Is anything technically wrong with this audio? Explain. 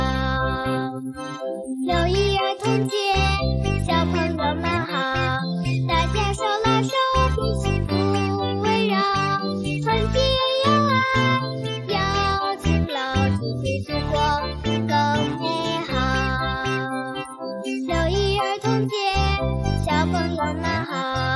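No, nothing is technically wrong with this audio.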